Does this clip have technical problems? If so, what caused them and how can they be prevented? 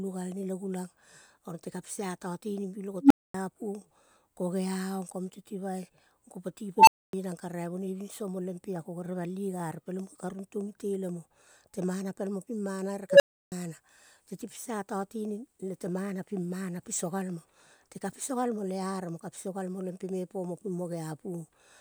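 Yes. An unstable filter appears three times: a recursive filter received coefficients that pushed it past stability, so its output grew without bound. At 3.01 to 3.34 s, 6.77 to 7.13 s and 13.10 to 13.52 s, a tone rises out of the speech within about 0.1 s, first around 300 Hz, then about 1 kHz, then about 500 Hz. It swells to clipping, overflows, and drops into silence lasting 240, 260 and 320 ms before the filter resets. Validating coefficients, keeping poles inside the unit circle, and clamping or resetting the filter state on overflow would prevent it.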